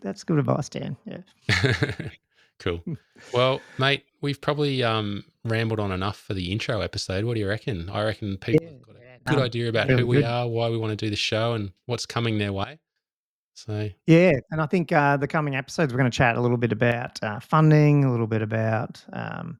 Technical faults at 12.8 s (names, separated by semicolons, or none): sudden gain jump